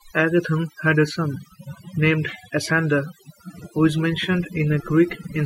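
Overdone noise removal runs through the whole clip. A noise reducer set too aggressively pulls individual frequency bands down whenever they sit near its noise estimate, taking quiet speech detail with them. The background drops and breaks up into twinkling specks.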